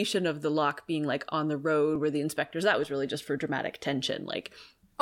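From 0.71 s, just after "of the", to 4.45 s, clicks recur every 1.24 s, about four in all, likely clock drift buffer slips from roughly 700 ppm mismatch.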